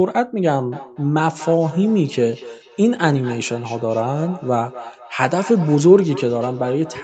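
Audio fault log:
0.72 to 7.04 s, feedback echo between two devices: speech returns roughly every fifth of a second, up to about 16 dB below the original. A second device replays it into this microphone, and the echo canceller misses it.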